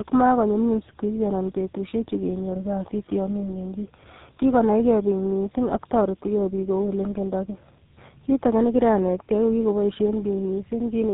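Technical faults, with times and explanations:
Throughout, tandem speech coding: two low-rate speech codecs in a row, likely AMR-NB then GSM full rate, stack roughness and warble beyond any single codec, with nothing above 3.8 kHz.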